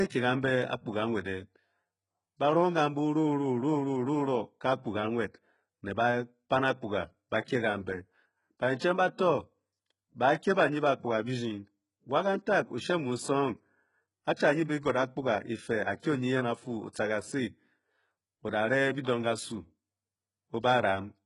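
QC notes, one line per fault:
Throughout: HE-AAC compression. The speech is band-limited with nothing above 11.1 kHz, and the treble below that cut sounds synthetic. The likely cause is spectral band replication: upper bands are copied from lower ones and scaled by a coarse envelope, so harmonics fail to line up across the crossover and sibilants turn gritty and metallic. The heavy damage fits a very low bitrate around 12 kbps. A spectrogram shows a hard ceiling at 11.1 kHz and repeated, smeared upper-band texture.
14.36, 16.93 and 19.03–19.07 s: pre-echo. A short hiss runs ahead of each sharp attack, lasting about 13 ms, 16 ms and 31 ms respectively, and the attacks sound softened. Each onset lands late in a transform block, so quantisation noise sized for the loud part spreads back into the quiet moment before it. On a waveform a low noise smear rises before each transient. On a spectrogram a broadband haze appears just before the vertical attack line.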